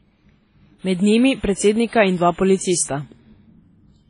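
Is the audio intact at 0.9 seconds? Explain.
No. At 0.9 s, as across the whole clip, the speech is dull, with nothing above 10.5 kHz and mixed artefacts, likely from transcoding between lossy codecs, each re-encoding the last one's damage.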